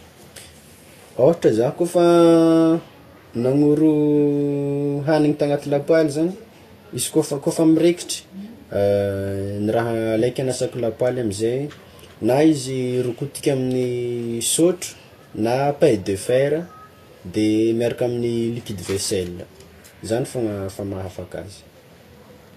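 Throughout the speech, the treble above 14.2 kHz is missing and the upper range sounds hissy and grainy, with roughened tones and softened consonant attacks, likely Vorbis compression at a bitrate around 33 kbps. Unlike steady background noise, this grain follows the signal and vanishes in pauses.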